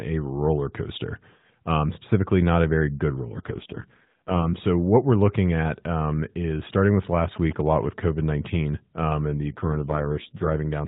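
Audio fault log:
3.24–4.60 s and 9.48–10.56 s, AMR rate drop: after "not a very good" and again after "um and", the AMR-NB stream falls from 12.2 to 4.75 kbps. The band stays the same with no gap, but fewer bits for the excitation pulses make the speech rougher and more synthetic until the higher rate returns.
7.36–8.56 s, GSM signalling bursts: following "is starting with last" and ending before "um and", a galloping dit-dit-dit of short buzzes at about 217 Hz sits about 15 dB below the speech. A nearby 2G phone is sending signalling bursts that the audio circuitry rectifies into audible buzzes.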